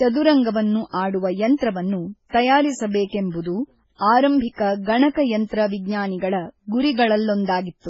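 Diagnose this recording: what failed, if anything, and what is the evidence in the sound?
The failure sits at the codec stage: the speech appears to have been encoded twice, most likely at a very low rate first (consistent with an MP3 of about 16 kbit/s) and then re-encoded as AAC-LC at around 32 kbit/s. This transcoding between lossy codecs runs through the whole clip. Nothing survives above 7.6 kHz, the lowest cut-off in the chain. The second codec spends its bits re-coding the first one's artefacts while adding its own, so both sets of artefacts are heard together.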